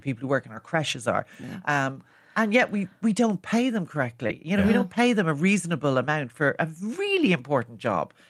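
It's a speech clip, and at 4.27 s there's a short concealed packet loss: about 20 ms never arrived, so the decoder stretched the preceding sound to cover it, leaving a brief smear through 4.44 s. Right inside that, at 4.29 to 4.31 s, is a lost packet rebuilt from error correction. That 20 ms stretch, which points to a single dropped packet, came back from the low-bitrate backup copy, so it sounds rougher and noisier.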